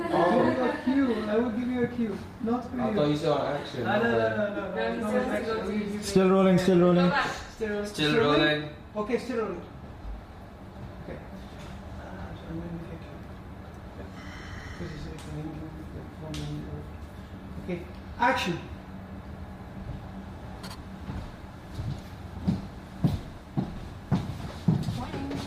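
Nothing in the audio stands out as a technical fault; it just runs along steadily with nothing going wrong anywhere.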